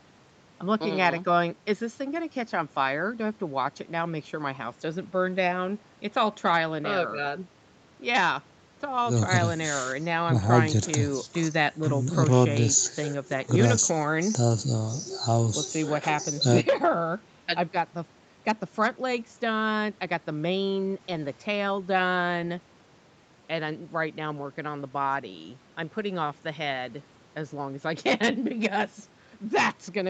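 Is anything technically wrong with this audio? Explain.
No, nothing is wrong: the speech stops at 8 kHz and carries the usual coding texture of a wideband call codec such as Opus, both normal for audio sent through a call microphone and a WebRTC call path.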